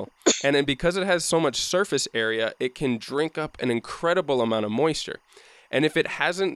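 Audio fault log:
throughout: timecode bleed, a faint chirping warble about 40 dB under the speech, as 24-frames-per-second linear timecode leaks in from a neighbouring line. Its square wave hops between tones near 1 and 2 kHz, so it ticks rhythmically rather than droning like hum.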